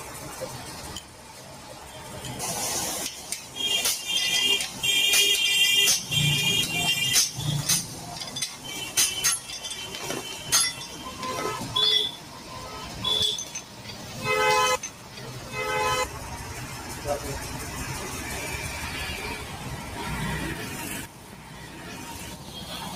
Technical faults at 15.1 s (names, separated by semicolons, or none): noise suppressor applied to music or sounds; sound cut by the noise suppressor